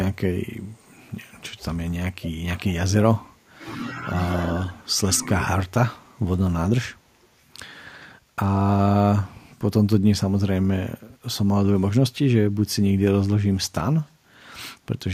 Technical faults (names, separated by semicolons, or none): echo leak; speech suppressed in double talk